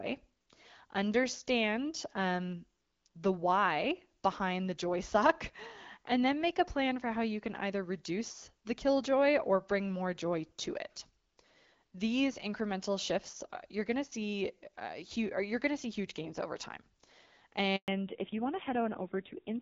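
At 17.76 s the speech cuts off abruptly, dying away within a few tens of milliseconds into 120 ms of silence until 17.88 s. This is a handover gap: the call switched networks and no speech frames arrived during the changeover, so that stretch is lost.

From 17.88 s to the end, the speech sounds duller and rougher, with nothing above 4 kHz. This is a fallback to narrowband. The call dropped from AMR-WB HD Voice at 12.65 kbit/s, with only light coding damage, to narrowband AMR, and the raspiness fits a low rate around 5.9 kbit/s.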